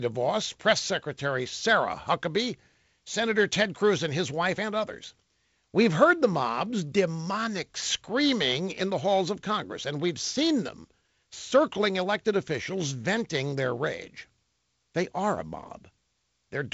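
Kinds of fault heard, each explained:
No faults heard in this speech.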